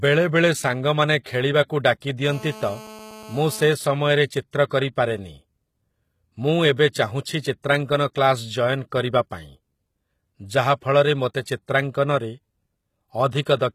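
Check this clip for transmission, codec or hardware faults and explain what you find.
Three faults are audible: codec damage throughout, a phone buzz, and one pre-echo.

Throughout, the treble is gritty and metallic, with nothing above 14.9 kHz. The likely cause is HE-AAC compression at a low bitrate, around 20 kbps, where treble is rebuilt from copied lower bands. On a spectrogram the top band looks smeared and repeated, ending in a hard edge.

From 2.25 to 3.69 s, GSM phone buzz from a nearby 2G call sits about 19 dB below the signal. Radio bursts at 217 Hz are rectified into a raspy buzz, seen as an evenly spaced harmonic comb.

From 6.76 to 6.78 s, pre-echo spreads 27 ms of codec noise ahead of an attack. It is heard as a brief hiss before a softened onset, and shows as a low smear just before the waveform's transient.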